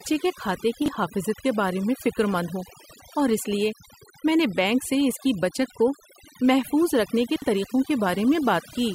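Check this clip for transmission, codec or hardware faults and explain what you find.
Two faults are present. Heavy noise suppression runs through the whole speech clip, and two brief passages play their audio in the wrong order.

Overdone noise removal affects the entire clip. The suppressor is set too aggressively. Any frequency band that sits close to its noise estimate is pulled far down or switched off. The quieter parts of the voice fall below that line and get cut along with the noise. The gaps between phrases drop to near silence, flecked with small twinkling artefacts.

Chunks out of order occur twice. The first is at 0.82 to 0.88 s, just after "کے کھاتے" and before "حافظت کے". The second is at 7.36 to 7.44 s, right after "کو محفوظ رکھنے کے". Each involves a 20 ms block of audio that arrived or was written late. It plays after the blocks meant to follow it, about 40 ms late in the first case and 60 ms late in the second. 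Nothing is missing, but the sequence is scrambled. Each spot sounds like a brief jumbled stutter.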